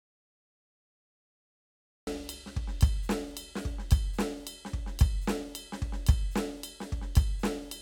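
The music clip opens in an audio dropout to silence. From the first instant to 2.07 s there is nothing at all. No room tone, no hiss, just silence. The music then enters abruptly, mid-flow, as if switched on. The likely cause is a lost input, such as a disconnected device or a failed link, while the recorder kept writing silence. Whatever played during those two seconds is gone.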